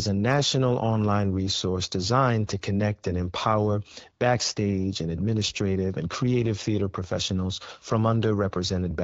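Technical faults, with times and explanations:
No technical faults are present; the speech comes through an AMR wideband (HD Voice) path that sounds consistent with 12.65 kbit/s, where the coded band reaches up to 6.4 kHz and the top of the range, from 6.4 to 7 kHz, is filled in with shaped noise.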